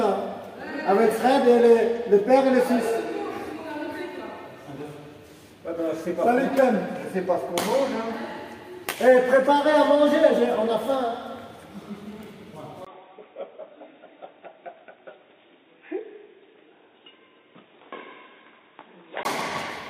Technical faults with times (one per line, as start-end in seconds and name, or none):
12.85-19.25 input switched to a poorer device